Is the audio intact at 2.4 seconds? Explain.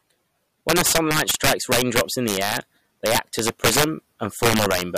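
No. Integer overflow affects 2.4 seconds, as it does the whole speech clip. The signal is driven about 10 dB past the top of the integer range, and instead of being held at the limit, each sample that exceeds it wraps around to the opposite extreme. Only a small share of samples, around one or two percent, cross the limit, but each one produces a violent crack on the loud speech peaks, far harsher than ordinary clipping.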